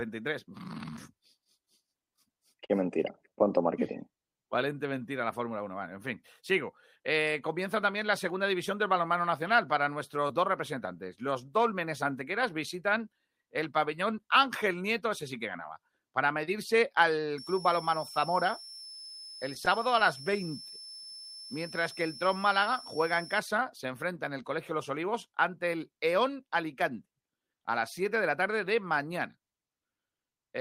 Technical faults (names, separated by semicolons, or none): scattered short gaps; jitter buffer slow-down; jitter buffer speed-up; switching supply whistle